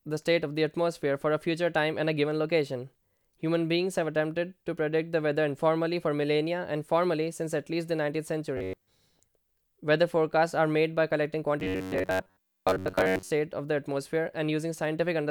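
At 8.57 to 8.88 s and again from 11.60 to 13.31 s the speech turns into a rigid, metallic buzz fixed near 94 Hz. This is robotic sound from repeated short buffers, likely from audio arriving too seldom, so a roughly 11 ms slice is looped for most of each stretch.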